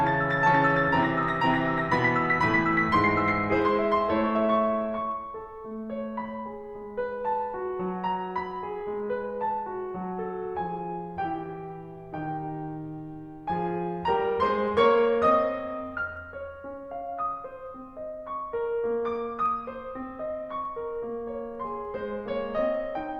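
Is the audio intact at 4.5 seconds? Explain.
No. At 4.5 seconds the music carries faint, evenly spaced ticks, part of a run of clock slip clicks from 0.34 to 23.05 s, roughly seventy in all, about one every third of a second. The likely cause is two devices running on separate clocks that disagree by roughly 70 ppm. Each time that drift adds up to a whole sample, one sample is dropped or repeated, producing one small tick.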